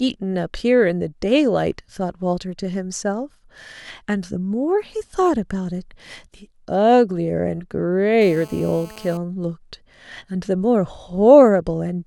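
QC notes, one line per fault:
8.21–9.17 s, GSM phone buzz: steady, raspy buzz at 217 Hz, about 23 dB below the speech, from a nearby 2G phone on a call, its transmit bursts rectified by the audio circuit. The spectrogram shows a ladder of harmonics from 217 Hz, and the waveform shows regular spikes.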